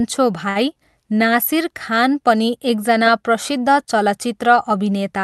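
A packet arrived late on this speech clip's call path, the jitter buffer ran dry, and the receiver stretched the last sound to cover about 61 ms, giving a short stall from a late packet at 0.49 to 0.57 s. Nothing is lost, but the sound is held too long with a faint buzz or dip, and everything after runs about 61 ms later.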